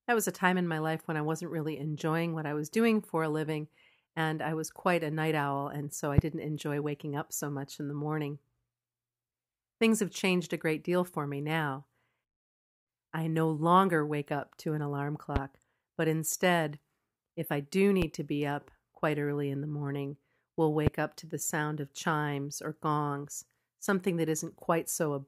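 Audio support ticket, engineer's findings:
Loud pop, four single hits at 6.18, 15.36, 18.02, 20.87 s, each about 30 ms and about 15 to 20 dB over the speech. Likely a voltage pulse from a plug, switch, static or driver.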